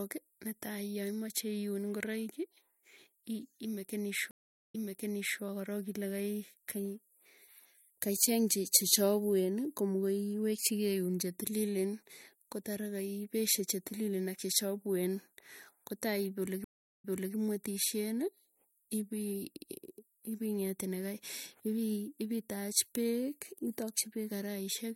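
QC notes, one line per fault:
4.31–5.41 s and 16.64–17.35 s, stream reconnect: the speech drops out for 0.36 s, then for 0.32 s, and comes back already spoken, stepping back 0.74 s and then 0.38 s, so a short stretch repeats, easing in rather than starting at full level. The connection broke and the player fell silent, reconnected and started a fresh decoder partway through the stream. The server resent a burst of recent audio, so playback resumed before the point where it had stopped.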